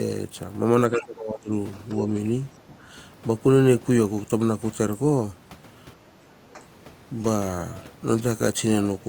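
From 0.93 to 1.53 s the talker's level falls away, at its deepest by roughly 20 dB. This is speech suppressed in double talk, likely from an echo canceller that could not tell the far-end echo from the near talker and turned everything down. It sounds muffled and gappy. On a waveform the envelope pinches in, and a spectrogram shows the upper bands thinning out.

Within that stretch, from 1.01 to 1.05 s, a brief scrap of the other side's voice leaks through, around 25 dB below the talker. The echo canceller likely left some loudspeaker pickup in the microphone signal. It is a faint fragment. On a spectrogram it appears as weak, separate harmonic traces beneath the main speech.

The same suppression returns at 2.67 to 2.87 s with a dip of about 10 dB, then briefly at 6.54 to 6.62 s with a shallow dip of about 5 dB. In both, the waveform shows short notches in the envelope.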